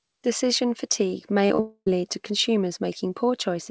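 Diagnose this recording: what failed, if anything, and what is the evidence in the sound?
The network stage failed, with short concealed packet loss at 1.46 to 1.52 s and again at 1.56 to 1.60 s. About 40 ms, then about 20 ms, of speech never reached the decoder in time. The receiver covered each gap by extending the preceding sound, so both spots come across as a brief smear or wobble rather than a clean cut. Audio in the first gap is replaced outright.

A long network dropout follows at 1.60 to 1.91 s. The concealment stretches the last sound for roughly a quarter of a second as a fading buzz or hiss. Then about 60 ms of near silence is heard before speech resumes. A small slice of audio is simply gone. The sound points to a likely burst of consecutive lost packets on the link. Throughout, the audio stops at 8 kHz, which fits a wideband G.722 call path.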